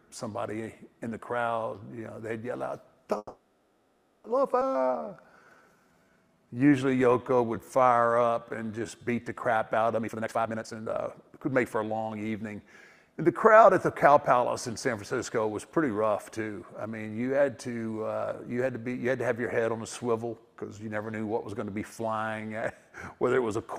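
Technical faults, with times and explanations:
3.17–4.26 s, call audio freeze: the last sound is stretched into a fading buzz-like fill for about 1.07 s, ending in a brief near-silence of about 40 ms. The audio then resumes exactly where it stopped with nothing lost. This is likely delayed packets draining the jitter buffer, which adds a gap rather than removing sound.
4.60–4.63 s, skip ahead: playback jumps forward, and roughly 0.7 s of audio is gone. The two sides are joined almost directly by a fill of only about 10 ms. A stretch of audio was dropped while later audio was already queued, which cancels most of the delay built up by the preceding freeze.
4.76–9.85 s, jitter buffer slow-down: the audio plays at about 86% speed with unchanged pitch, so sounds are drawn out and a faint warble may appear. The receiver repeated single pitch periods and slivers of pauses over and over, adding about 0.73 s to rebuild its reserve.
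9.94–12.16 s, jitter buffer speed-up: the audio rushes along at about 147% speed while the pitch stays the same, giving a hurried, clipped feel. With more audio buffered than needed, the receiver repeatedly cut out short pitch-period pieces, removing roughly a second in total to reduce delay.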